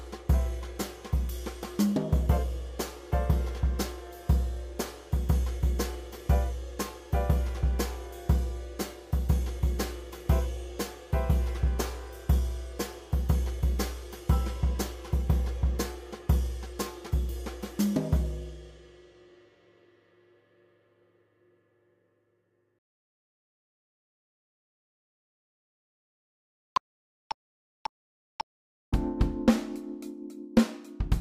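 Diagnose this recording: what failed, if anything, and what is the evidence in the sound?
Nothing failed in this recording, and the sound gives no evidence of any fault.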